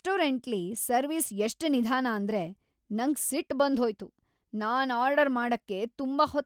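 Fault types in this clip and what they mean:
No faults are audible anywhere in this speech recording.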